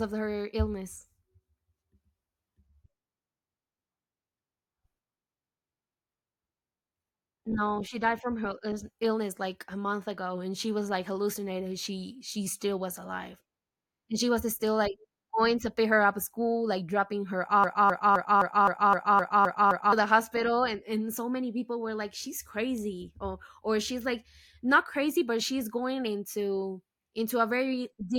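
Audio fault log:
17.64–19.92 s, broken-record loop: after "school like dropping her", a 0.26 s fragment repeats nine times back to back before "the hospital and and". The stream likely stalled and kept resending its last piece, losing the speech in between. The waveform and spectrogram show identical blocks recurring every 0.26 s.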